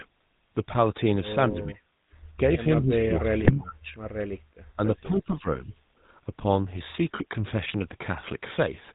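The whole recording passes through the GSM full-rate codec, which fits a 13 kbps coder. It rebuilds the voice from a vocal-tract filter driven by sparse, regular pulses and discards everything above 4 kHz, leaving the speech plainly buzzy, gravelly and dull throughout.

From 1.51 to 1.85 s, the echo canceller likely met both parties talking at once and could not tell this talker from the loudspeaker return, so it pulled the level down by roughly 25 dB. The voice sinks and thins for about a third of a second.

The same suppression returns from 2.8 to 3.95 s and is deeper, around 30 dB at worst. For about a second the speech drops away in uneven pieces as the canceller clamps down.

Inside that stretch, from 3.4 to 3.51 s, GSM bit errors corrupt the decoder's filter, pitch and gain values, which points to about four damaged frames. The result is a short gargling squawk with a pop.

From 5.01 to 5.47 s, the double-talk suppression dips the voice again, this time by about 15 dB. 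It is a milder ducking and loss of brightness lasting about 300 ms.

Within that dip, from 5.19 to 5.24 s, an echo leak likely lets a scrap of the far loudspeaker's pickup slip past the canceller. It is heard as a faint, delayed copy of the speech, 255 ms late and roughly 25 dB down.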